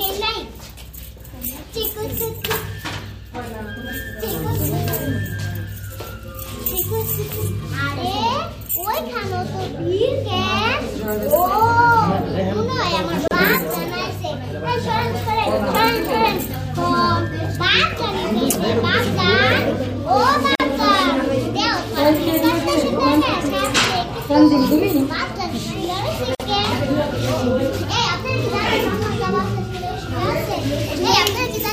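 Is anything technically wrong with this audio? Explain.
Yes: gaps at a join of encoded pieces at 13.28 s (33 ms), 20.55 s (46 ms) and 26.35 s (48 ms). Each untrimmed encoder delay and padding leaves a brief dropout with smeared edges, a vertical blank stripe on a spectrogram.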